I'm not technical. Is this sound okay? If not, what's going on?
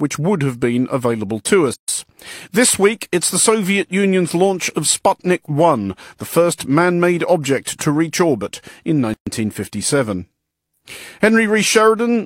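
No. The speech briefly drops out twice. At 1.74 s, after "have been available to", about 150 ms of silence cuts in. At 9.14 s, after "to reach orbit in", a gap of about 130 ms does the same. Each is a gap at a join of encoded pieces. The recording was saved in separate chunks and stuck together. The leftover silence at each chunk's edges was never trimmed away.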